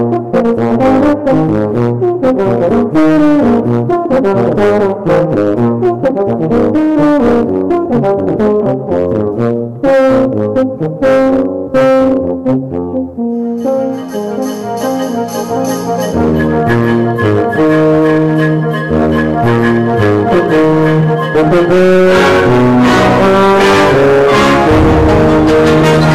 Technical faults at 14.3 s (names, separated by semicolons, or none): hard clipping